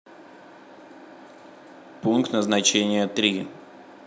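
No technical faults are audible.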